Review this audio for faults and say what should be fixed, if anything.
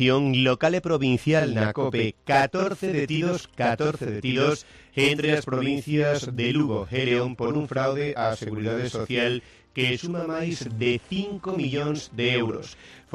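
Channel delay (doubling) runs from 1.40 s to the end of the clip. One channel arrives about 46 ms behind the other, which fits a 2048-sample buffer offset, and once the two are summed to mono the late copy stands apart as a distinct slap echo at equal level. Each sound is heard twice in quick succession. To prevent it, keep both channels on the same buffer path so they stay sample-aligned before any mono fold-down.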